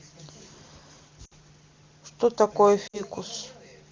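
At 1.25 to 1.33 s and again at 2.87 to 3.02 s, the speech briefly smears and sags, then returns slightly rough. These are lost AMR speech frames: about 60 ms failed each time, and the wideband decoder stretched the last good speech with fading gain.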